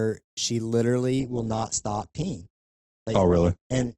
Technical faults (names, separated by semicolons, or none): adaptive stream at a lower bitrate